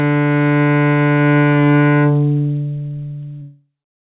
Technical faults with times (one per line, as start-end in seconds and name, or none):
none